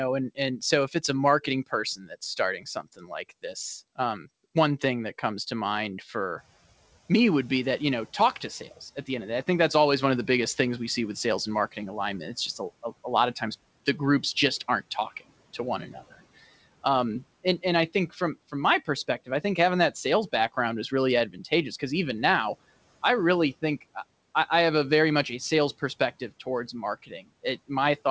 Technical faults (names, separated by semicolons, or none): speech cut by the noise suppressor